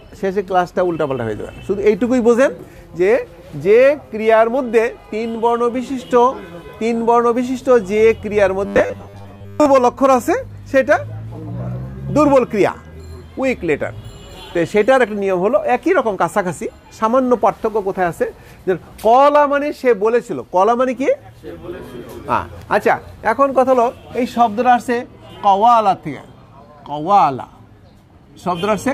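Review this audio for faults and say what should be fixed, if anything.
From 8.66 to 9.66 s, new audio likely stopped arriving in time, so playback kept looping a short stretch, which fits a 10 ms buffer, instead of the missing audio. The loop imposes a rigid 100 Hz buzz, a robotic sound from repeated short buffers, over most of that second. Giving the receive buffer more headroom so it never runs dry and falls back to repeating would prevent this.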